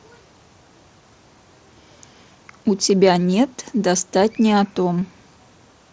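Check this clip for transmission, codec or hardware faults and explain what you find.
Two brief dropouts show up in the speech, both concealed Bluetooth headset packet loss, heard over an mSBC wideband link whose band stops at 8 kHz with light grain on louder syllables.

At 3.15 s and again at 5.01 s, roughly 7.5 ms of audio goes missing, which points to a single lost headset packet each time. The receiver fills each gap by repeating the best-matching recent stretch of waveform, so the loss is nearly hidden. On a waveform the patch looks like a copied cycle with a slight seam; a spectrogram shows a thin vertical smear at each time.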